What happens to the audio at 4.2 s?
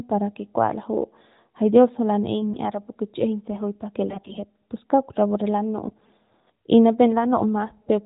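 Between 4.08 and 4.44 s, after "kichꞌijiñ se juy pake", AMR bit errors corrupt the less-protected frame bits at roughly 7 percent, mispositioning excitation pulses so the speech turns hoarse and gargly.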